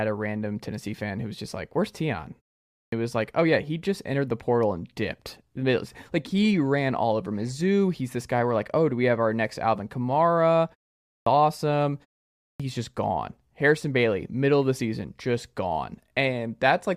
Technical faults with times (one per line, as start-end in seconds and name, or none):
2.67-2.92 clipped start after a pause
10.99-11.26 clipped start after a pause
12.36-12.60 clipped start after a pause